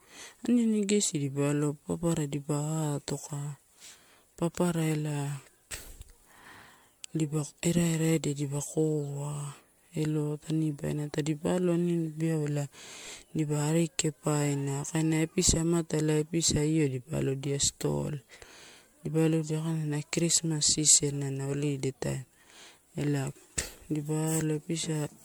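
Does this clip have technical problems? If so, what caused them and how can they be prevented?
Yes. Throughout the speech there is a swirly, watery smear with a hollow, phasey quality, and consonant attacks sound blurred and soft rather than crisp. The cause is likely generation loss: the audio appears to have been MP3-encoded and decoded repeatedly, around seven times, at a rate that fits 96 kbit/s. Each pass re-quantises on a shifted frame grid, so noise and spectral gaps pile up beyond what one encode would leave. To prevent it, keep working copies in a lossless format and encode to MP3 only once, at the final step.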